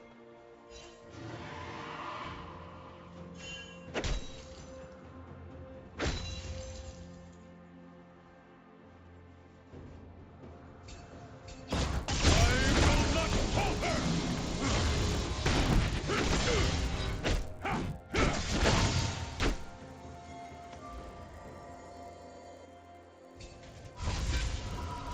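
Resampler restarted on every block, from 11.71 s to the end: each 10 ms block is converted alone, so its edges see false neighbouring samples. The small error at every boundary makes a 100 Hz buzz under the signal, in a 16 kHz to 48 kHz conversion.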